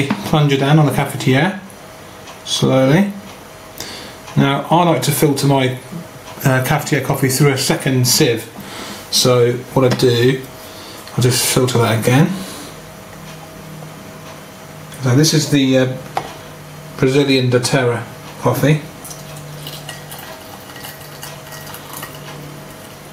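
Gain pumping runs through the whole clip. The swing is large, around 10 dB. The likely cause is input gain set far too high, with a fast limiter or compressor clamping down on each peak. Loud and quiet passages sit unnaturally close in level. The result sounds squashed.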